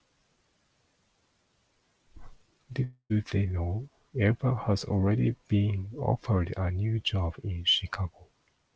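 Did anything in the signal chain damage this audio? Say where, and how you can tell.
Yes, at the network stage. From 2.84 to 3.12 s the sound becomes a fading buzz for about a quarter second, then brief silence, resuming at "they know" minus the lost part. Concealment filled the gap first, unlike a clean cut, so this is likely a long network dropout.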